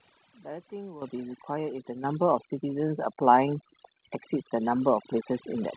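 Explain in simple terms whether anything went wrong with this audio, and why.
The noise removal was overdone throughout. The cleanup was set so hard that it shut off parts of the sound along with the hiss. The background drops and breaks up into little twinkling specks.

The microphone volume was also stepped up, three times, at 1.02, 2.04 and 3.06 seconds. Each time, the software decided the mic was too quiet and turned it up in one go. Speech and background jump together: a big jump first, then a smaller one, then a slight one.

The audio is also narrow and phone-like, with nothing above 4 kHz. That's just the normal call path, which fits the G.711 phone codec.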